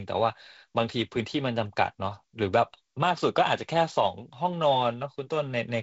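Nothing here counts as a fault; the speech arrives over G.722 wideband telephone coding at 48 kbit/s, which leaves a light coding texture and nothing above 7.7 kHz, and that's just how this link sounds when it's working as intended.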